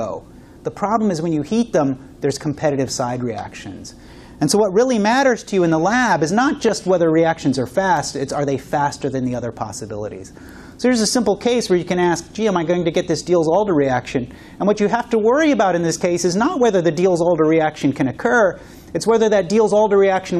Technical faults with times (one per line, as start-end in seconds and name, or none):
none